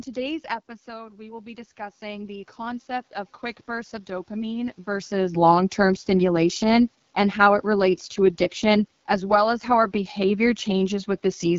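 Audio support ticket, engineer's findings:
Rough, raspy coding throughout, with hiss-like fizz in the top band. Nothing above 7.5 kHz. AMR wideband (HD Voice) codec, damage consistent with its 8.85 kbit/s mode: too few pulses to model the voice, so detail collapses and the 6.4 to 7 kHz region is synthetic shaped noise.

Voice and room noise swell together from 0.85 to 5.19 s, rising about 11 dB. Automatic gain rising. The level at the mic dropped about 12 dB when the talker moved back around 0.5 s, and the AGC slowly pushed its gain up to compensate, lifting the background along with the voice.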